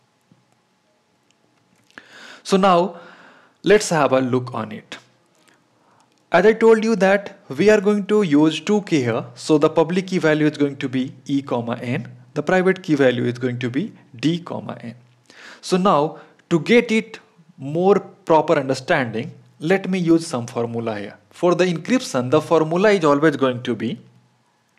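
Between 1.09 and 22.49 s, clicks recur every 2.38 s: likely clock drift buffer slips, where about 70 ppm of mismatch drops or repeats a few samples.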